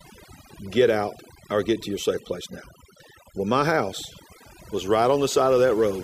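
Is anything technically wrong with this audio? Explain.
Yes. Overdone noise removal runs through the whole speech clip. A noise reducer set too strong pulls individual frequency bands down whenever they sit near its noise estimate, taking quiet speech detail with them. The background breaks up into twinkling, warbling specks that follow the gating rather than a steady codec-style smear.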